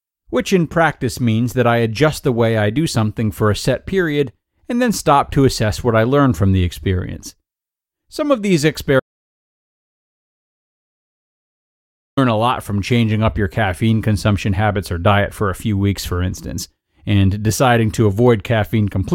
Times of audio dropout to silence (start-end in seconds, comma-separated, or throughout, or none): 9.00-12.17